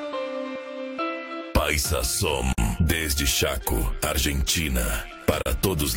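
Gaps at joins of encoded pieces open at 2.53 s and 5.42 s, silences of about 50 and 40 ms that break the continuous sound, edges smeared. Separately encoded pieces were joined untrimmed, leaving encoder start delay and final-frame padding, before the sound resumes where it stopped.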